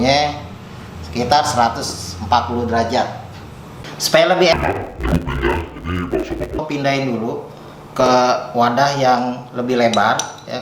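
From 4.53 to 6.60 s the audio turns dull and robotic with a 100 Hz buzz, the classic sign of interleaved audio read as planar. Each 10 ms block's alternating left-right samples get split into halves, so the blocks are too short for any clear octave drop.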